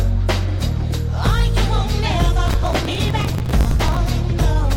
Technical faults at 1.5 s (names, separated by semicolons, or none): none